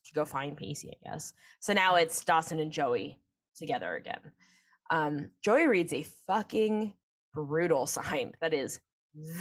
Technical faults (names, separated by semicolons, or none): none